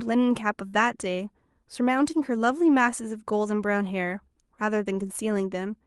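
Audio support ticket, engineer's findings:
Burst of packet loss, 0.67 to 0.76 s. Speech stalls into a held, decaying tail for about 52 ms, then resumes about 60 ms further on, skipping that stretch. Probable component: jitter buffer/concealment on the call receive side, extending the last frame while fading. Call codec audible as Opus-style coding texture, band-limited near 12 kHz.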